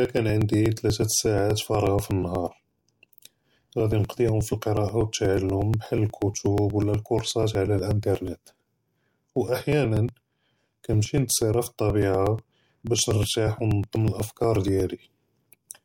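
From 0.05 s to 15.77 s there are periodic USB or driver dropouts: every 0.12 s, about eight times a second, a few milliseconds of speech are skipped outright as something stalls the audio path. You hear a steady ticking riding on the voice, gone in the gaps.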